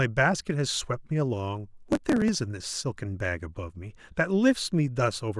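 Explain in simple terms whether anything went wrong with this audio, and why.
There's a stretch of processor overload crackle from about 1.89 to 2.35 s, heard as a gritty, tearing crackle over the speech. The computer handling the audio got too busy to prepare each small chunk of sound in time, and those chunks look to be around 5 ms each. It missed roughly twenty deadlines over that stretch, and each miss left a tiny hole with a hard edge. All those little holes together make the crackle, which stops once the load eases.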